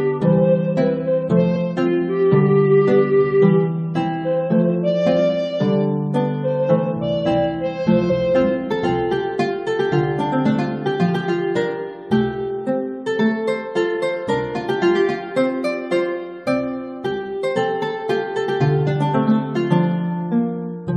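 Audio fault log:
1.55 s and 8.09–8.11 s, damaged data in a compressed stream: two brief blips, each about 15–20 ms, where corrupted frames throw the decoder out of sync until it finds the next frame header. Unlike a plain dropout or click, the cause is misread compressed data.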